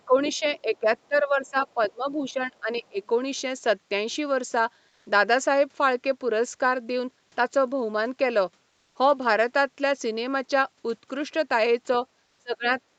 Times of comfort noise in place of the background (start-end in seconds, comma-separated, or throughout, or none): 4.89-5.05